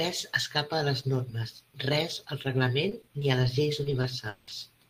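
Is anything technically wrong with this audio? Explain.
Yes. Repeated packet loss (robotic sound) occurs twice: from 2.89 to 3.45 s, just before "les lleis", and from 3.83 to 4.53 s, just after it. Packets went missing in quick succession, and each hole was filled by extending the preceding sound. The first stretch has four short gaps, none longer than 20 ms, leaving it choppy. The second has five, one lasting 180 ms, so over a third of it is patched and sounds choppy, with pieces missing.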